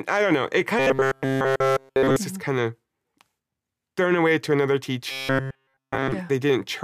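From 0.79 to 2.16 s, and again from 5.11 to 6.12 s, the speech goes robotic: a stiff, metallic buzz at 134 Hz that only loosely tracks the words. That's robotic sound from repeated short buffers, likely caused by audio arriving too slowly, so the playback loops a chunk of about 7.5 ms over and over. In both stretches pretty much all of it is repeats, which stamps that fixed pitch on everything.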